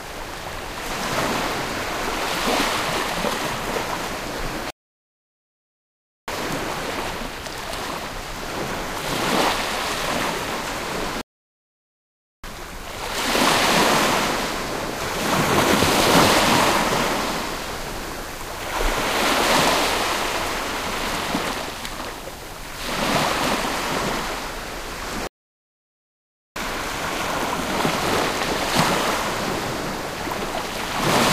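The player most likely ran short of data or had its thread blocked three times, a playback stall each time, so output drops to silence in the middle of this recording of sounds. The gaps run from 4.70 to 6.28 s (about 1.6 s), 11.21 to 12.44 s (about 1.2 s) and 25.27 to 26.56 s (about 1.3 s), and after each one the sound resumes once playback recovers.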